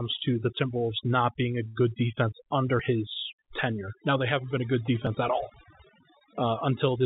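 Overdone noise removal runs through the whole speech clip. Bands near the noise floor are gated to near silence, leaving twinkling specks, with a spectrogram full of isolated flickering blotches.

From 1.68 to 1.78 s, just after "not being a", there is a short stall from a late packet. The jitter buffer ran dry and the last sound was stretched for 72 ms, heard as a held, slightly buzzy sound. It shows as a smeared, repeated stretch without any gap.

At 2.80 s, just before "his tenure", a jump in the sound comes from a dropped buffer (overrun), likely lost before the program collected it. About 20 ms vanishes, with a waveform discontinuity but no silence.

At 5.07 s, between "haven't been a good" and "at all", the same kind of skip removes about 10 ms, leaving a sharp vertical line on the spectrogram. The call path's bandwidth cuts off at 4 kHz, with nothing above it.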